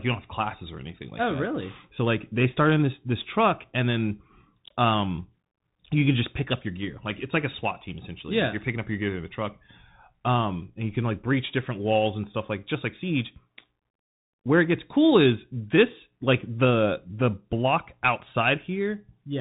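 From start to finish the speech carries the signature of a Bluetooth CVSD headset codec. Nothing passes above 3.8 kHz, and the audible damage fits a 64 kbit/s one-bit stream whose step size adapts. Loud, bright passages outrun the step and distort, sibilants turn scratchy, and a granular hiss rides beneath the speech. A plain telephone band-limit would sound dull but clean. Here the slope-overload grit and the grainy noise floor mark the delta-modulation coding.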